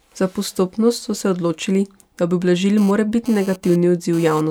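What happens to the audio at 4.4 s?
At 4.41 s a GSM phone buzz stops. It ran from 2.78 s. A nearby 2G phone was transferring data, and its radio bursts, repeating about 217 times a second, were rectified by the audio circuitry and fed into the signal path. The result is a hard, raspy buzz at 217 Hz, rich in harmonics and unrelated to the speech, sitting about 20 dB below it, and it cuts off at 4.41 s.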